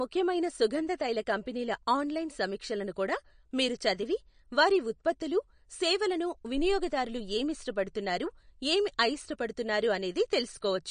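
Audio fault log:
Throughout, MP3 compression: the treble stops dead at 9.6 kHz, and weak detail below it flickers between frames, so the speech sounds watery, which fits a likely bitrate near 40 kbps. A spectrogram shows a flat ceiling at 9.6 kHz over patchy, speckled high bands.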